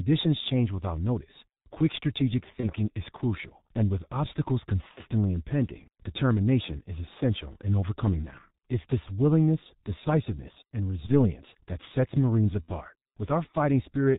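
Heavy G.723.1 codec damage runs through the whole speech clip, consistent with its 6.3 kbit/s mode: nothing passes above 4 kHz, and the slowly updated voice model in 30 ms frames makes speech muffled and hoarse with blurred consonants. Unlike brief glitches, this colouring never lets up.

VoIP packet loss concealed by the speech codec follows at 2.60–2.72 s, 4.91–5.03 s, 11.06–11.31 s and 12.62–12.70 s. These fit one, two, one and two lost 30 ms frames. Rather than a silent gap, the decoder stretches the last sound into a fading buzzy tone or coloured noise, and the voice stays weak or distorted briefly afterward.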